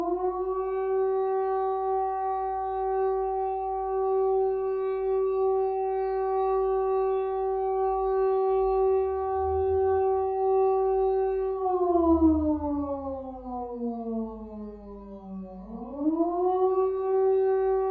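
An everyday sound recording, with nothing technically wrong with it.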